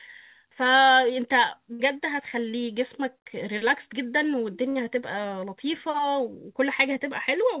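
At 0.64 to 0.67 s there is a short concealed packet loss. A fraction of the speech did not reach the decoder in time. The receiver bridged the hole with about 12 ms of extrapolated sound, continuing the preceding pitch or noise, and then joined back to real audio about 20 ms further on. The result is a brief smear or wobble.

Two bursts of packet loss follow, at 1.73 to 1.81 s and again at 4.69 to 4.77 s. Each time a run of packets went missing, and the receiver filled about 60 ms by continuing the last sound and fading it down. A voiced sound turns into a held buzz, and an unvoiced one into a dying hiss. The speech then resumes about 60 ms later than where it broke off, so that stretch of the original is gone.

All of this passes through a narrowband call path with nothing above 4 kHz, which fits G.711 mu-law at 64 kbps.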